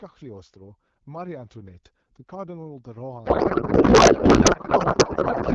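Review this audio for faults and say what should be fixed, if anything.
From 3.25 s to the end, the clear wideband speech, consistent with AMR-WB at around 12.65 kbit/s, collapses into garbled noise and warble that barely tracks it. This is a codec payload misread: the sender packs AMR frames octet-aligned, the receiver parses them as bandwidth-efficient, so every field lands shifted. Unlike packet loss, nothing drops out or repeats; the damage starts abruptly and persists continuously. Prevent it by making both ends negotiate and honour the same octet-align setting in the session description.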